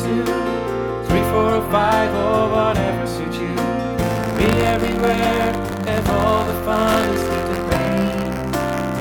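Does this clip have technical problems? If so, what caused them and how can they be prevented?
Yes. From 3.99 s to the end, buffer tearing adds a rattling buzz at 86.1 Hz, which fits a 512-sample buffer. The writing program and the hardware reader have slipped, so a small sliver of each buffer replays audio from a few tens of milliseconds earlier, with hard joins on both sides. On a spectrogram this appears as evenly spaced vertical striations, and the waveform shows regular step discontinuities. To prevent it, keep the write position safely ahead of the hardware read pointer by using adequate buffer sizes and real-time scheduling for the audio thread.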